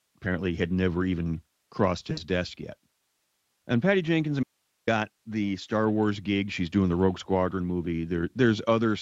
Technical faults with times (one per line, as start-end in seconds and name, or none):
2.11-2.21 VoIP packet loss concealed by the speech codec
4.43-4.87 audio dropout to a faint residue